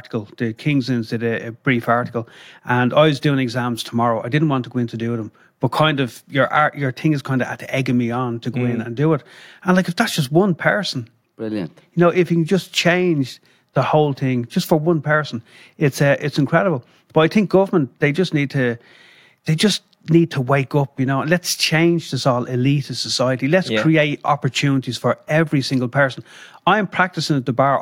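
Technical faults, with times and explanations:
Throughout, resampler restarted on every block: the speech carries a buzz at 100 Hz, one tick every 10 ms, because each block was converted alone (which fits a 48 kHz to 44.1 kHz conversion) and its edges were computed without the neighbouring samples. Unlike mains hum, the buzz vanishes in pauses and follows the signal level. Unlike dropout clicks, its spacing stays perfectly regular.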